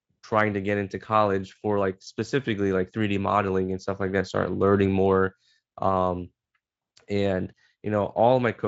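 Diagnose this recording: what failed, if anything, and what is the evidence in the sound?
Nothing failed in this recording, and the sound shows no evidence of a fault.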